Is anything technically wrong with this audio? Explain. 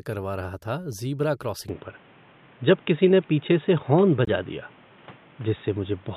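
Yes, there are two faults.

From 1.69 s to the end, the speech turns dull and boxy. Nothing is left above 3.8 kHz. There is no gap at the change. The level shifts by around 5 dB, and a new background noise appears, roughly 30 dB below the speech. This is likely an input switched to a poorer device, such as another microphone or a headset's call mode. That device passes a narrower band and brings its own tone, gain and noise.

From 4.25 to 4.31 s, the sound drops out abruptly for about 56 ms. This is a corrupt frame muted. Damaged bits made the decoder reject the compressed data, and the player filled the hole with silence. The length points to two lost frames. The speech resumes on time afterwards, because the timing is kept.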